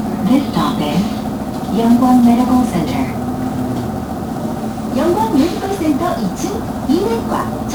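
The audio has passed through 1-bit DFPWM compression for its whole length, with each sample reduced to a single up-or-down bit that nudges an adaptive level toward the waveform. That crude tracking leaves heavy broadband quantisation noise layered over everything, so this sound comes out fuzzy and crackly, and its treble is dulled or replaced by hiss. The density of the grain fits a low-rate stream of around 48 kbps.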